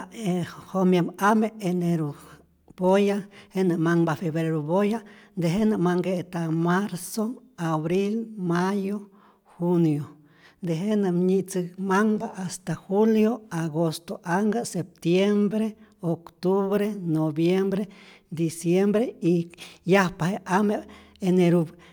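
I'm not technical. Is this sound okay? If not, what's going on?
Yes, this sound is okay, and there's nothing going on that needs fixing.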